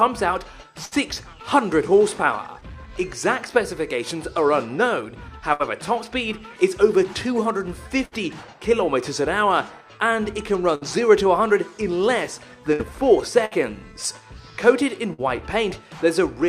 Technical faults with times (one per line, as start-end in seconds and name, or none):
0.85-0.94 burst of packet loss
5.53-5.62 burst of packet loss
8.05-8.14 burst of packet loss
10.75-10.84 burst of packet loss
12.73-12.82 burst of packet loss
13.45-13.54 burst of packet loss
15.13-15.21 burst of packet loss